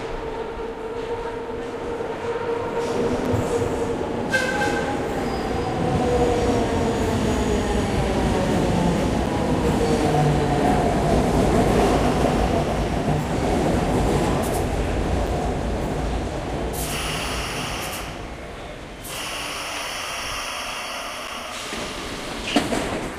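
A doubled audio track runs from 2.76 to 8.58 s in this recording of everyday sounds: a second full-band copy trails the original by roughly a third of a second at about 5 dB lower. It has no decay or room colour and starts and stops abruptly. The likely cause is the same audio being captured twice, once through a slower path, or an edit leaving two copies out of step. Gaps between chunks occur at 3.25, 9.26, 15.27 and 21.27 s. Each is a hard-edged hole of about 7 ms, repeating every 6 s. No sound is lost. Instead, playback pauses at each join, as happens when audio is stored or sent in 6-second blocks and each one begins slightly late or carries padding at its boundary.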